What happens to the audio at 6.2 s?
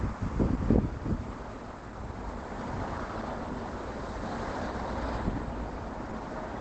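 At 6.2 s the sound is muffled and hoarse, as it is through the whole clip. Nothing is present above about 8.7 kHz, so the top end is cut away. The damage is plainly audible. The likely cause is Opus compression running in its speech-oriented SILK mode at wideband. That mode models the signal coarsely and discards the highs. Such narrowing fits a low bitrate, around 16 kbps.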